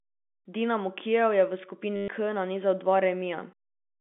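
Speech carried over a G.711 telephone line, band-limited to roughly 200 Hz to 3.5 kHz, breaks into a robotic stutter just after "je v", from 1.96 to 2.08 s. This is packet loss with the last packet repeated: 120 ms went missing, and the replayed fragment buzzes near 100 Hz, which fits 10 ms packets. A dropout would go silent instead.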